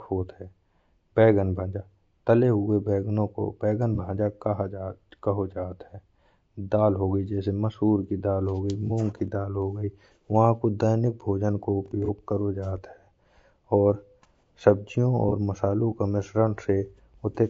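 Speech runs throughout with a rough, grainy texture. Noise fills the gaps between harmonics, and the top band sounds thin and synthetic. The likely cause is low-delay AAC compression (AAC-ELD) at a low bitrate, which fits about 32 kbps. Its short frames resolve pitch harmonics poorly. AAC frame loss with concealment occurs four times. Brief smeared, noisy patches fall at 3.95–3.99 s, just after "को बैंगन", then at 8.87–8.91 s and 12.05–12.09 s, and at 15.29–15.33 s, just before "मसालों का". Each gap sounds like one missing frame that the decoder filled in from the last good spectrum.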